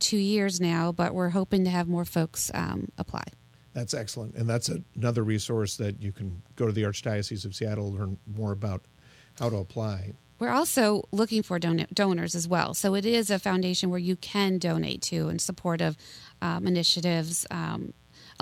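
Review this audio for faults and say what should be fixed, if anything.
Switching spikes leaking in twice every 60 Hz mains cycle produce mains buzz throughout: a steady, raspy buzz roughly 35 dB under the speech. To prevent it, keep dimmers and rectifier supplies off the recording circuit and use shielded, balanced cabling.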